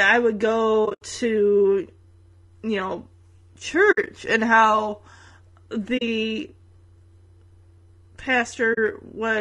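Throughout, the speech sounds rough and grainy with a thin, synthetic top band, likely from low-delay AAC compression (AAC-ELD), consistent with about 32 kbps. Its short frames resolve pitch harmonics poorly. Soft-edged dropouts come from AAC frame loss with muting, where the decoder zeroes missing frames. These occur at 0.85–1.02 s after "I would" and at 3.91–4.08 s before "and how", with gaps of up to around 70 ms. Brief 40 ms holes follow at 5.97 s and 8.73 s.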